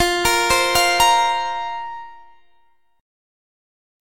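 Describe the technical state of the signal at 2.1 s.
At 2.1 s the signal is intact, with no audible fault.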